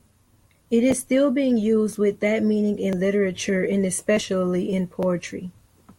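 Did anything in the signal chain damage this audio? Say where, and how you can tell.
Yes. The damage happened at the driver or buffer stage: periodic USB or driver dropouts. Something stalls the USB audio path or its driver about once a second, and the audio for that moment is skipped, not filled. Each loss is only about a millisecond, so the speech jumps forward and leaves a small tick. You can hear roughly seven of them from 0.92 s to 5.93 s, spaced exactly 1.0 s apart. That strict timing points to a recurring system task, not to the source.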